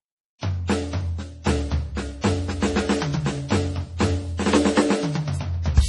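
Likely heavy MP3 compression, pointing to a bitrate near 32 kbps, starves the encoder of bits, so nothing survives above 11.3 kHz and the music sounds watery and swirly throughout. Pre-echo at 0.66, 1.42, 2.21 and 3.97 s spreads block quantisation noise backwards, putting a 24 to 35 ms hiss before each attack and softening it.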